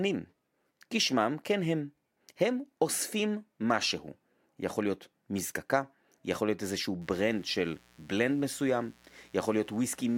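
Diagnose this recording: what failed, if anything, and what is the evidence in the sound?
Mains buzz enters at 7.01 s and runs to the end of the speech clip. It is a steady, raspy buzz built on 60 Hz harmonics, well below the speech level. This is an analogue wiring fault. Switching spikes from a dimmer, rectifier or unshielded cable arrive twice per cycle.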